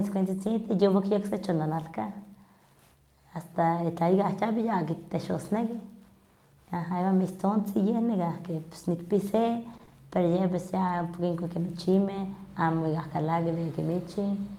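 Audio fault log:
0.47 s, lost packet rebuilt from error correction: a brief rough, noisier patch with no audible gap. One packet went missing, and the decoder played the lower-bitrate copy carried in the next packet, rebuilding 20 ms of speech at reduced fidelity.
9.73–11.01 s, scattered short gaps: a few small ticks and smeared hiccups across this stretch, with the speech staying mostly clear. About three separate packets were lost or late, totalling 60 ms, and the receiver bridged each hole by extending the preceding sound, concealing 100 ms in all.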